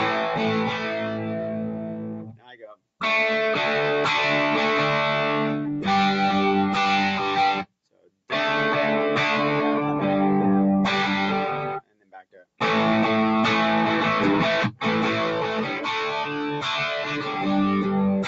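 A noise suppressor built for speech stays on for the whole clip, applied to sounds it misreads as noise. Held and fading parts get pulled down, so levels swing by around 10 dB. The sound pumps and thins, while attacks pass through.

The noise suppressor cuts the sound hardest from 0.73 to 2.84 s, then from 7.63 to 8.31 s and from 11.66 to 12.61 s. These dips go about 17 dB deep. Sustained sound sinks and decays end early. Shallower cuts of about 6 to 7 dB follow at 15.64 to 15.87 s, 16.24 to 16.66 s and 17.03 to 17.46 s.

Above all this, nothing reaches past 8 kHz, which fits the call path's Opus coding at around 32 kbps.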